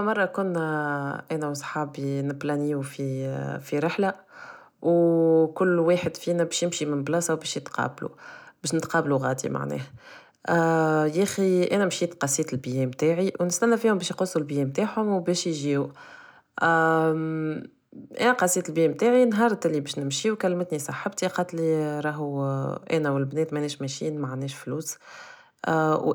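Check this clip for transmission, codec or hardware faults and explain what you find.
Nothing stood out on listening to this speech recording that would point to a problem in how it was transmitted, encoded or captured.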